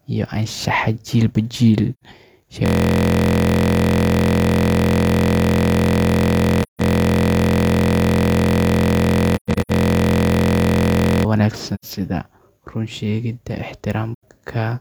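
Speech clip with two kinds of trouble. The main one is a system hang loop from 2.66 to 11.25 s. The machine or driver froze while the audio hardware kept replaying the same ring buffer, so a single 23.22 ms slice repeats over and over. That repeats at 43.1 Hz, short enough to come across as a steady buzz rather than a stutter, and the length fits a 1024-sample buffer. On top of that there's AAC frame loss with muting: lost frames had their spectrum zeroed, and the overlapping windows fade the sound out and back in, leaving soft-edged holes. They're at 1.94 to 2.03 s (about 85 ms), 6.62 to 6.81 s (about 170 ms), 11.75 to 11.85 s and 14.14 to 14.22 s (each around 85 ms). At 9.36 to 9.71 s the losses come scattered, 256 ms missing across roughly 340 ms, with the longest gap about 150 ms.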